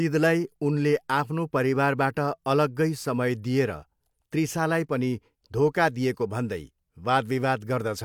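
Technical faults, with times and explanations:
Nothing stood out as a technical problem on listening to this speech recording.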